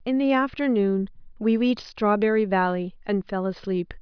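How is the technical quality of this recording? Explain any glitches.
Nothing goes wrong technically anywhere in this recording.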